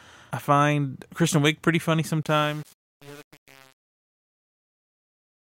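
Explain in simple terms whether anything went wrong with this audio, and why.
Something did go wrong, in the fade-out at the end of this speech clip. Right after "pretty funny", at 2.23 s, the level begins sliding down smoothly, and from there to the end at 5.57 s the sound grows gritty. That is truncation distortion on a fade. The volume stage kept too few bits, which sounds like about 7, and added no dither, so the quiet tail is reduced to a few coarse square steps.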